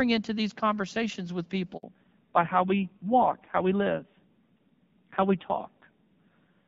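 At 1.8 s, right after "into these conversations with", the call is passed from one network to another and no frames arrive during the switch. That handover gap makes the speech die away within a few tens of milliseconds and leaves about 60 ms of silence until the new link carries audio again.

From 1.83 s to the end, the link comes back on a lower-quality codec, a fallback to narrowband. Before the switch, the light wideband coding fits AMR-WB at about 12.65 kbit/s. After it, nothing above 4 kHz survives, so the speech sounds duller and rougher, which fits AMR-NB at around 5.9 kbit/s.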